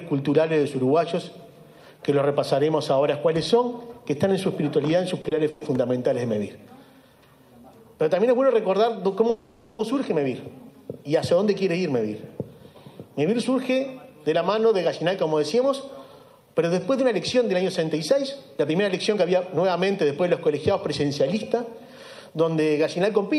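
Short stalls from a late packet occur twice in quick succession, at 5.21 to 5.26 s and again at 5.28 to 5.33 s. Each time a packet failed to arrive on schedule, the jitter buffer ran dry, and the receiver stretched the last bit of sound for about 30 ms until the packet turned up. Playback then resumed from the same point, so nothing is lost, but the sound briefly hangs.

Call audio freezes follow at 5.50 to 5.63 s and at 9.30 to 9.81 s. Playback stops moving forward, and the last sound is carried on and fades for about 110 ms and then about 490 ms. It never drops fully to silence. The likely cause is packets held up in transit, which emptied the jitter buffer. When they arrive, the audio continues where it left off, inserting a gap without losing anything.

A jitter buffer speed-up runs from 14.11 s to 23.35 s. The buffer holds more audio than its target, so the receiver trims many short pitch-period-sized pieces to catch up. 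Roughly half a second is removed, and playback runs at about 106% of normal speed with the pitch unchanged. The result sounds noticeably hurried, with a slightly compressed, rushed rhythm through to near the end.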